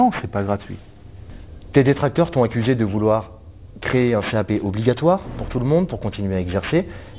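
From start to finish there's aliasing: the sound was downsampled without a proper low-pass first, which fits a drop to an 8 kHz rate. Anything above 4 kHz folds back as unrelated tones sitting roughly 20 dB under the signal, so the top end sounds gritty and metallic.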